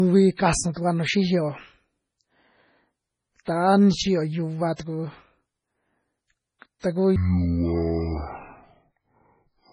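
Right from the start there's heavy MP3 compression, likely at a bitrate around 24 kbps, with watery, swirly artefacts and smeared consonants. From 7.16 s to the end, a section plays at the wrong speed, half speed, likely from a clock mismatch, so the speech turns deep and slow, roughly ten semitones lower.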